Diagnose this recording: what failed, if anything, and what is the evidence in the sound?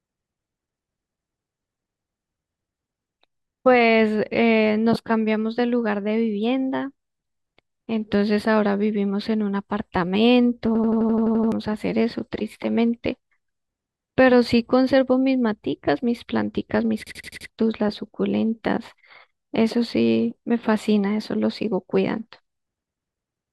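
Driver or buffer stage: a system hang loop, twice. From 10.75 to 11.52 s and 17.07 to 17.49 s, one 85 ms slice of speech replays as an 11.7 Hz stutter while the driver froze, which fits a 4096-sample ring buffer. Roughly 0.7 s and 0.4 s of speech go missing.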